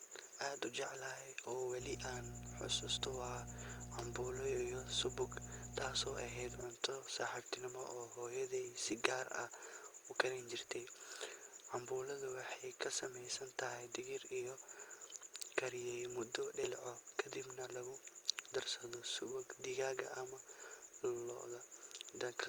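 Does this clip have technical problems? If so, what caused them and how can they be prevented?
Yes. From 1.78 to 6.66 s a steady low 60 Hz tone with some low harmonics sits under the speech, nearly as loud as it, ending just before "subaxnimo oo hooyaday si". This is mains hum, where a ground loop or nearby transformer leaks the power line into the signal. Balanced cabling, a single ground point and keeping transformers away from the mic path prevent it.

Between 16.63 and 16.67 s the speech jumps abruptly with a small blip, from "kariyay muddo" straight to "kadibna lagu", so a stretch of the recording is missing. This is likely a stream segment skipped: one chunk of the segmented stream failed to load and the player moved on to the next. Larger player buffers and segment retry logic prevent it.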